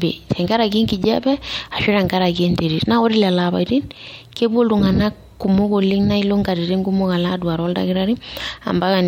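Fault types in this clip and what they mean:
The signal carries no audible technical fault of any kind.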